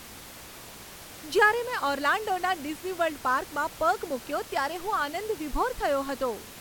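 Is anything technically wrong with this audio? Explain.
No, nothing in this speech recording points to a technical fault. The room's own background noise can be heard underneath, sitting about 17 dB below the speech, and it belongs to the recording itself.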